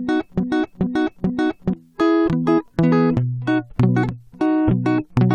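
From the first instant until 1.73 s, the music is caught in a broken-record loop: a 0.43 s fragment repeats exactly, back to back, three times. The playback chain likely stalled and kept resending its last buffered piece, so the intervening music is lost.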